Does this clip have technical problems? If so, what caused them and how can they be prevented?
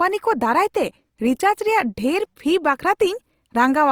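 Yes. Throughout the speech, the audio sounds noisy, rough and grainy, and the damage is plainly audible, even though the spectrum still reaches about 20.2 kHz. This is likely Opus compression in its music (CELT) mode, at a rate that fits roughly 24 kbps. When bits run short, the encoder keeps each band's energy but fills the band with folded lower content or with noise rather than leaving it empty. To prevent it, encode at a higher bitrate, or use Opus's speech-oriented mode for voice material.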